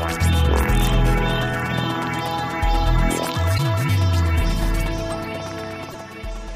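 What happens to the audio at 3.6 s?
Damaged data in a compressed stream, from 3.54 to 3.60 s. Corrupted bytes break decoder sync. A short chirp, squawk, click or hole results.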